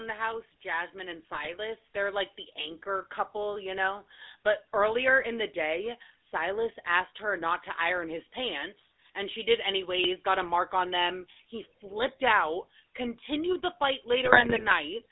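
Right from the start the whole clip runs through the GSM full-rate codec. The band sits at roughly 250 Hz to 3.7 kHz, and the voice has that buzzy, gravelly edge from a vocal-tract model driven by sparse, regularly spaced pulses. That fits the old 13 kbps full-rate coder. The call microphone processing's bass cut is normal here.

Just after "the house", at 0.62 s, automatic gain starts rising. The gain control decided the input was too quiet and slowly pushed it up by about 8 dB until 8.33 s. Voice and background swell together over those several seconds rather than jumping.

At 1.32 to 1.47 s there's a short burst of GSM bit errors. Corrupted bits reached the decoder and scrambled its filter, pitch and gain values for a few frames, so the sound briefly squawks and gargles.

They come back for longer at 14.24 to 14.73 s, right after "out continued the fight". This time it's nearly half a second of the same corrupted decoding, with pops and mangled, warbling spectral jumps.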